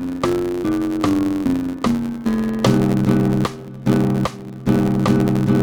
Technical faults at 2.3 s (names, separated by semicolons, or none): block size mismatch (truncated)